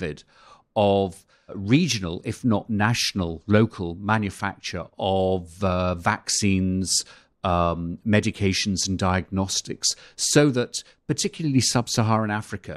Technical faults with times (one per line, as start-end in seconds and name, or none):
none